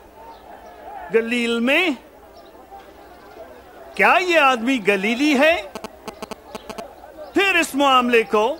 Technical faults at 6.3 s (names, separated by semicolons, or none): GSM signalling bursts